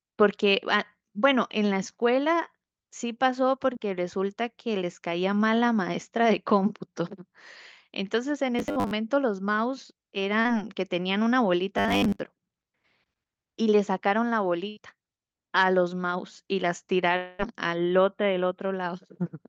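At 3.73 s there's a short concealed packet loss: a sliver of the call didn't reach the decoder in time, and the receiver papered over roughly 12 ms by extending the preceding sound before easing back in. It's a quick smear or wobble. The same thing happens again at 10.41 to 10.47 s, with about 40 ms patched over, so it's a slightly longer blur.

From 8.59 to 8.91 s the sound goes rigid and metallic, with a fixed 100 Hz buzz riding on it. That's robotic sound from repeated short buffers: audio likely arriving too seldom, so the last 10 ms or so gets looped while real audio is skipped. About half this stretch is repeats. It comes back harder at 11.77 to 12.20 s, where most of the stretch is looped.

At 14.69 to 14.79 s a burst of packet loss takes out about 80 ms. The receiver holds the last sound as a fading buzz or hiss, then jumps ahead with that chunk gone.

From 17.17 to 17.41 s the sound stretches into a fading buzz or hiss that never drops to silence, then resumes further on with roughly 220 ms missing. 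That's most likely a long network dropout, with the receiver masking the whole gap. All of this sits on an Opus call path whose bandwidth tops out at 8 kHz.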